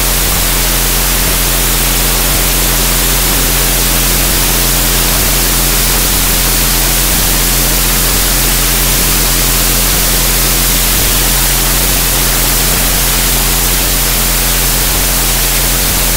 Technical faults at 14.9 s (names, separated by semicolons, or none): wrong sample width